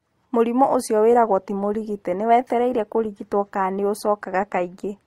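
At 1.09 s the speech drops abruptly to an adaptive stream at a lower bitrate and stays there to the end, with no gap. Codec artefacts rise, which fits a step from about 64 to 24 kbit/s Opus; a spectrogram shows upper bands suddenly sparse and smeared.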